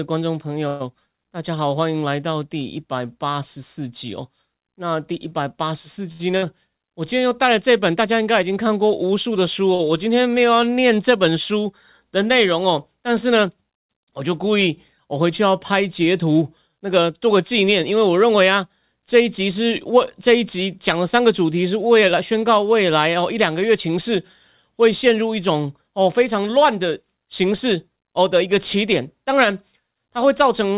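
Speech, heard through a call path whose audio stops at 4 kHz, which points to G.711 mu-law at 64 kbps. A call audio freeze at 0.68 to 0.82 s holds the last sound as a fading buzz for about 120 ms before the audio carries on from where it stopped, with nothing lost. This is likely packets held up in transit draining the jitter buffer, adding 120 ms of delay. A short stall from a late packet at 6.12 to 6.21 s stretches the current sound for 73 ms with a slight buzz. A packet missed its playout time, the empty buffer was bridged by extending what came before, and playback then resumed in place. A burst of packet loss follows at 6.37 to 6.44 s: the receiver fills 50 ms by continuing and fading the last sound, then jumps ahead, so about 60 ms of audio is simply gone because the packets never arrived in time. A second short stall from a late packet at 9.75 to 9.89 s holds a sound for 44 ms before playback picks up again from the same point. 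A jitter buffer speed-up from 24.64 to 28.86 s runs the speech about 5% fast at unchanged pitch, sounding slightly hurried. The buffer had overfilled, so the receiver trimmed pitch-period-sized slices repeatedly, removing roughly a fifth of a second.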